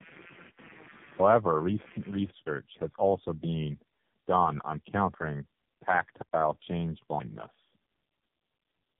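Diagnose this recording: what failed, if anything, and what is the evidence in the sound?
Rough, muffled, warbly speech throughout with nothing above 3.8 kHz: tandem speech coding at the codec stage, with several narrowband speech codecs in series, each recoding the previous one's degraded output.

A buzzy, chirping pulse around 150 Hz, roughly 20 dB below the speech, from 0 to 2.3 s: computer activity noise, where load changes in the computer disturb the shared analogue ground.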